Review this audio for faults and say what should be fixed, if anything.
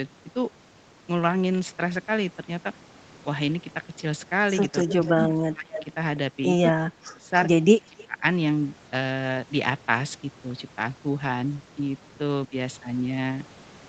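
Echo leak. Brief delayed copies of the speech appear at 4.82–4.88 s, 5.76–5.84 s, 6.43–6.47 s and 7.98–8.05 s. Each trails the original by about 280 ms. They sit at about 10 to 25 dB below the speech. The likely cause is a far-end loudspeaker whose echo canceller let residue through. Prevention: use a headset at that end or improve its echo cancellation.

Speech suppressed in double talk. The speech dips sharply at 4.89–5.82 s, 6.76–7.31 s and 7.86–8.23 s. Those drops reach about 25 dB. A shallower dip of about 10 dB occurs at 12.47–12.53 s. This likely happens because the echo canceller ducks everything while both sides talk. Prevention: use better double-talk handling, or headsets so that less suppression is needed.

Timecode bleed. From 11.35 s to the end, a faint chirping warble sits behind the speech. It is about 40 dB down. It switches between pitches near 1 kHz and 2 kHz. Its rhythm matches 29.97 frames per second of linear timecode leaking in. 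Prevention: route and shield timecode lines away from the audio path.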